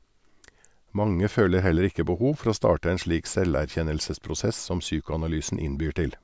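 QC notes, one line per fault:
No faults found in this speech clip.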